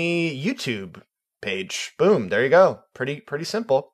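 Nothing goes wrong here at any point; the speech just carries on steadily with no faults to point to.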